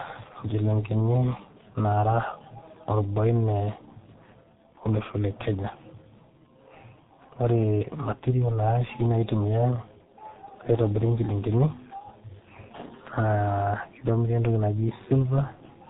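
Throughout the speech, the audio has passed through the G.723.1 codec. It holds the signal to a very low bitrate, which fits about 6.3 kbit/s, and nothing above 3.8 kHz survives. The damage is heavy: speech sounds muffled and hoarse, with smeared consonants.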